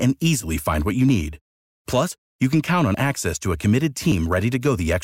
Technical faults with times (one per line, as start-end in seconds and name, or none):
1.09 dropped buffer (overrun)
2.11 dropped buffer (overrun)
2.94 dropped buffer (overrun)
4.12 dropped buffer (overrun)